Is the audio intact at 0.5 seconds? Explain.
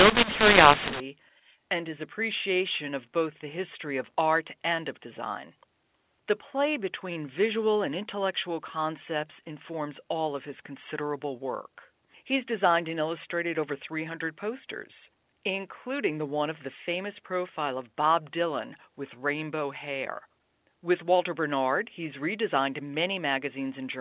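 No. From 0.0 to 1.0 s, mu-law and A-law are mixed up: A-law telephone samples decoded as mu-law scramble levels, making speech harsh and filling pauses with noise.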